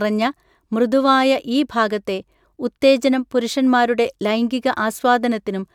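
Nothing goes wrong anywhere in this bit of speech, so there's no fault to point to and no moment that stands out as a technical problem.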